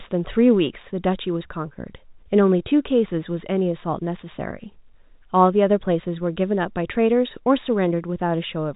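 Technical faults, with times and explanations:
Nothing stood out on listening to this speech, which comes through the telephone band of G.711 coding with nothing above about 3.8 kHz.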